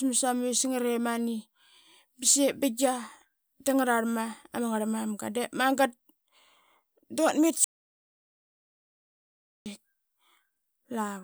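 Audio dropout to silence from 7.64 to 9.66 s in this speech recording: about 2 s of silence, likely from lost input while silence was written.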